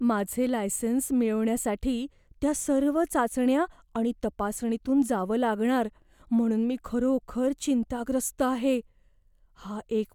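No technical faults can be heard anywhere in the recording.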